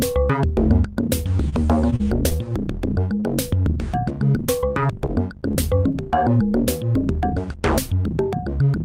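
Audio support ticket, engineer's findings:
Held sound at 1.49–1.54 s, about 28 ms stretched. Short stall from a late packet: jitter buffer ran dry, receiver extended the last sound, then resumed from the same point with nothing missing.

Brief smears at 1.90, 1.96–2.01, 2.29–2.33, 3.20–3.24 and 5.92–6.10 s. Short concealed packet loss: 20–40 ms chunks missing each time, decoder patched them by continuing the preceding sound, then crossfaded back.

Drawn-out sound at unchanged pitch, 2.04–2.72 s, running at 95% speed. Jitter buffer slow-down: receiver repeated small pitch periods to rebuild its reserve, adding 47 ms.

Choppy, robotic patch at 4.60–5.56 s. Repeated packet loss (robotic sound): five holes, longest 22 ms, about 100 ms lost in total, each filled by extrapolating the last sound before the next loss.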